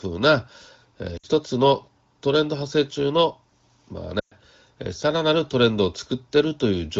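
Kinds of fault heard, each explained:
Lost AMR speech frames: Damaged frames were replaced by the last good speech, with falling gain. Heard as a fade to near silence, then a longer one.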